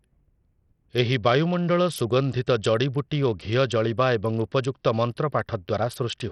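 Speech, with Bluetooth SBC compression damage running through the whole clip. Nothing is present above 14.3 kHz, and the top end that remains thins out and flickers as the coarse sub-band coding starves the weakest high bands of bits. A gritty quantisation noise and some aliasing ride on the speech throughout. The damage is heavy, which fits a small bit pool, and the likely cause is an SBC link running at a low rate of about 64 kbps.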